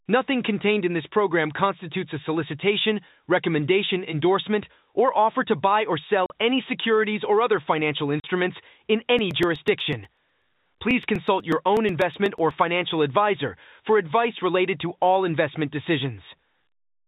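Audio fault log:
6.26 s and 8.2 s: packet loss filled with silence. Right after "offer to buy or" and again after "securities or other financial", the speech drops into a 40 ms hole with hard edges. Each gap fits two lost packets, which the receiver replaced with silence, cutting the waveform abruptly.
9.19 to 12.51 s: periodic USB or driver dropouts. A steady train of ticks runs through the speech, one every 0.123 s, about thirty in all, ending before "financial advisor for advice". Each tick is a couple of milliseconds of audio skipped when a background task stalled the driver.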